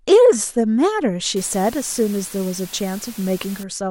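From 1.36 s to 3.63 s the speech drops to low bit depth with dither: the samples are rounded to only about 6 bits, with random dither added first so the rounding error turns into steady white noise rather than distortion. It sounds like an even hiss sitting roughly 20 dB below the speech. On a spectrogram, a flat noise floor fills every frequency band across that span; the waveform shows a thickened, fuzzy baseline between syllables.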